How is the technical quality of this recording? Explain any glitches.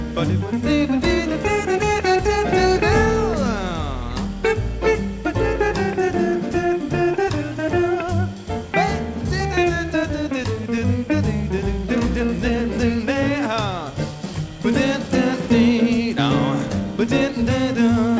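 No glitches can be heard: the signal stays steady throughout, and its content stops at about 8 kHz, which fits a wideband call codec such as G.722 carried over a normal WebRTC call path.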